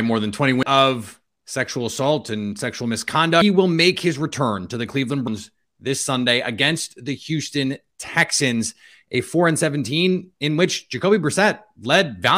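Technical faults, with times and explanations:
0.63 s, 3.42 s, 5.27 s: compressed frames skipped. Whole 92.9 ms frames of the compressed stream never reached the output, either missing from the file or rejected by the decoder as damaged. The audio leaps forward by about four frames just before "of sexual assault and", about seven after "sexual assault and sexual", and about three at 5.27 s.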